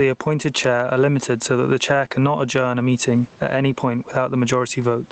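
Gain pumping runs throughout. The gain swings around 15 dB with loud speech, likely from excessive gain driving a fast limiter.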